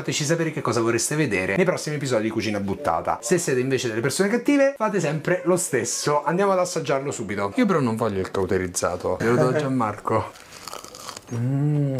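No technical faults can be heard anywhere in this audio. There is nothing in the sound that calls for comment at any point.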